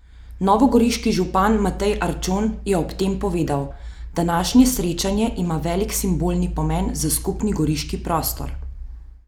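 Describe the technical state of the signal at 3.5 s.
At 3.5 s the speech signal is intact, with no audible fault at that moment.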